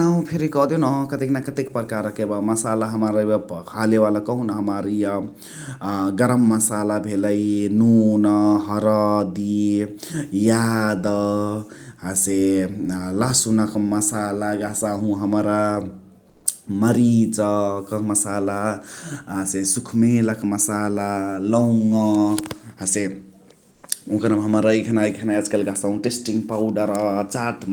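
Speech clip with two short stretches of comfort noise in place of the background, at 16.29 to 16.45 s (160 ms) and 23.71 to 23.83 s (120 ms). In both pauses the real background, about 39 dB and 34 dB below the loudest speech, gives way to a flat, featureless hiss, about 1 dB louder in the first gap and about 6 dB quieter in the second. The likely cause is discontinuous transmission such as Opus DTX, where the receiver synthesises noise while the sender is silent.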